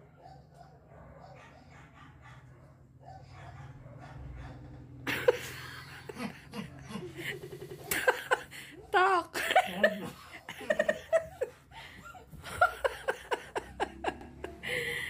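At 4.02 s there is a single sharp click. It is brief and leaves no gap in the sound. Its likely cause is dropped samples. A tiny slice, well under a millisecond, seems to be missing. The waveform jumps straight to a later value, and that jump makes the click.

The rest are repeated buffers. Each time, new audio came late, so the last block played again. Each block lasts about 93 ms, which fits a 4096-sample buffer. From 4.64 to 4.83 s, one block sounds two extra times. From 7.43 to 7.80 s it repeats four extra times, the longest stutter. From 10.77 to 10.96 s it repeats twice more. From 14.21 to 14.30 s it repeats once. Hard joins between copies give a choppy stutter. No sound seems lost afterward.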